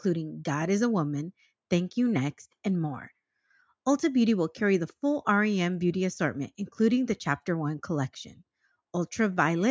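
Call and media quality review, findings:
Nothing to flag on this one; the speech comes through with no audible faults to chase down.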